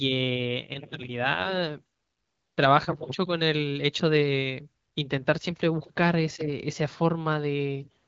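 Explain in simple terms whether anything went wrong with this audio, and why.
Nothing went wrong with this speech recording: it passed through the AMR wideband (HD Voice) phone codec as intended, which simply means the sound stops at around 7.6 kHz, as normal for that kind of call audio.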